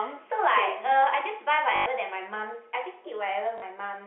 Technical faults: packet loss with last packet repeated

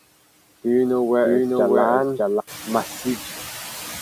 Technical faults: noise suppressor artifacts; doubled audio track

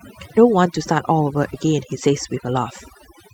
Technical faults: Wi-Fi interference; overdone noise removal; skip ahead; jitter buffer speed-up

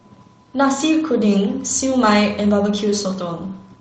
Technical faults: lost packet rebuilt from error correction

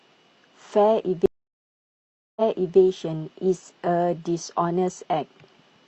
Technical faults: stream reconnect

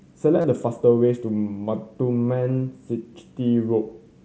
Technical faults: concealed Bluetooth headset packet loss

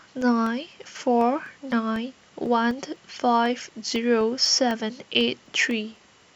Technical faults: periodic USB or driver dropouts

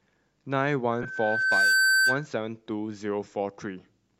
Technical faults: loudspeaker feedback squeal; lost LE Audio frames

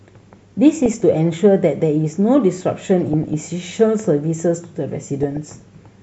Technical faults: MP2 compression; DAB burbling

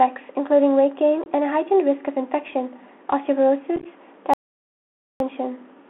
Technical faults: Bluetooth CVSD headset codec; unconcealed Bluetooth headset packet loss; audio dropout to silence

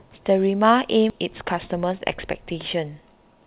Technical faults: skip ahead; jitter buffer speed-up

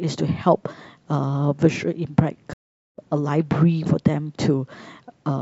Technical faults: playback stall

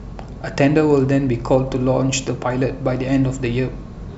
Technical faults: none

